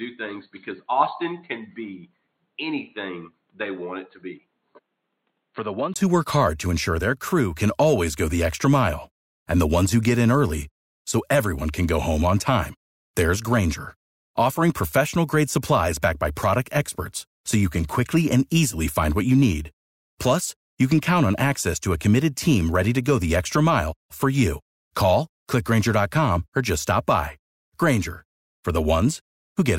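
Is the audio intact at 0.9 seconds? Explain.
No. From the start to 5.96 s the speech is band-limited, with nothing above 4.3 kHz, and sits roughly 10 dB quieter over a faint new noise floor well below it. This is likely an input switched to a poorer device, a narrower-band microphone or headset path. A brief 20 ms gap marks the return to full, brighter sound just before "who work hard to". A simple filter or codec bandwidth drop wouldn't shift level and noise together like this.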